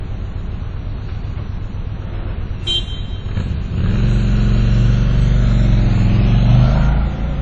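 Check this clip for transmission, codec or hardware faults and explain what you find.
One fault is present, and it runs through the whole clip. From start to finish the audio has nothing above 9.5 kHz and has a ringing, washy texture with hiss that breathes with the signal. This is likely WMA compression at a low bitrate, around 32 kbps. The long transform blocks smear quantisation noise across tens of milliseconds, and weak spectral lines are zeroed, so the damage is plainly audible.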